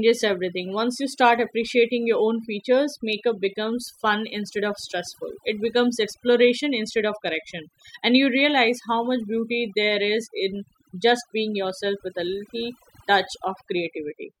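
A speech recording with overdone noise removal from start to finish: the background drops and breaks up into twinkling specks. On a spectrogram, the gaps show isolated flickering dots, and the speech harmonics appear ragged and patchy.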